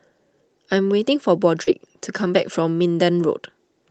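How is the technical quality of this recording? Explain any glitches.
The recording has one glitch, a short concealed packet loss from 1.63 to 1.70 s. About 40 ms of the call arrived too late to decode. The receiver extended the preceding sound to fill the gap, then blended back. It sounds like a brief smear or wobble. The audio passed through a call codec, which fits the top end stopping near 8 kHz.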